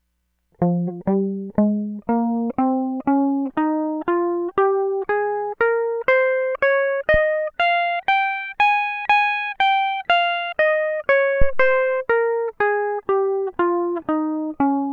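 At 7.14 s a phantom power thump cuts into the music. It is a short, deep thud peaking at about -11 dBFS and dying away within 13 ms. A second, heavier phantom power thump follows at 11.42 s. It peaks at about -5 dBFS and takes 107 ms to decay, fading out by 11.89 s. Each one comes from a supply switching on or off on a live input. The sudden voltage step passes through the coupling capacitors as a low-frequency pulse.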